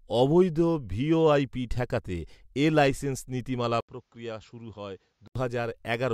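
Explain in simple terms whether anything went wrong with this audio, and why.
After "ঠেকাতে এ লাইসেন্স নীতিমালা" there's a brief gap at 3.81 s, then duller, quieter speech until 5.36 s, likely an input switched to a poorer device.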